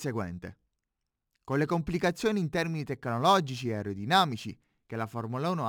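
A speech recording with crude rate conversion running through its whole length. A gritty, inharmonic fizz rides on louder and brighter sounds, roughly 25 dB below the speech. It fits stretching 44.1 kHz audio to 48 kHz by repeating samples, with no filtering.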